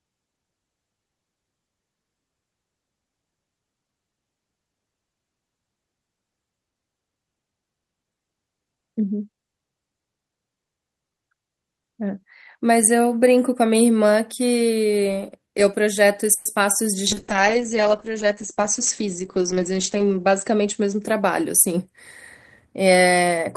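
At 16.33 s the speech stretches into a fading buzz or hiss for 120 ms, then resumes where it stopped, with nothing lost. This is a call audio freeze, likely from delayed packets emptying the jitter buffer. The receiver extended the last sound, adding 120 ms of delay.

Right after, at 16.55 to 16.58 s and again at 16.72 to 16.83 s, there are brief smears or wobbles. These are short concealed packet loss: about 20 ms of audio each time never reached the decoder, and the receiver patched the gap by continuing the preceding sound before blending back.

From 17.08 s to 22.32 s the speech turns rough and muffled. This is a call bitrate drop. The Opus encoder fell from 40 kbps to 9 kbps, stayed at its lowest for about 3 s, and narrowed its bandwidth to an 8 kHz cut-off, coding coarsely until it recovered.

Inside that stretch, from 18.57 s to 20.81 s, the speech runs about 5 percent fast without any pitch change, sounding slightly hurried. 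This is a jitter buffer speed-up. To shed excess buffered delay, the receiver cut short pitch-period pieces repeatedly, removing about a tenth of a second overall.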